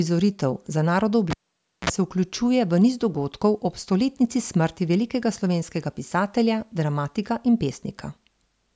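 Speech, with a cable pulled and plugged in from 1.30 to 1.90 s: a pop, roughly 0.54 s of near silence, then a 46 ms burst of 60 Hz mains buzz as the plug tip reconnects alone, and a second pop when the signal returns through the call-processed, 8 kHz-limited path.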